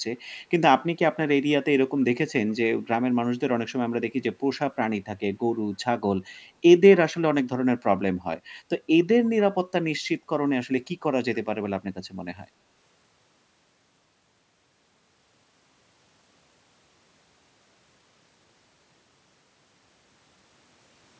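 From 2.00 to 2.04 s, a faint scrap of the speech returns about 0.27 s late, far quieter than the original. This is an echo leak, likely from a far-end speakerphone whose echo canceller let residue through. Unlike reverberation's smooth decaying tail, it is a separate, delayed copy.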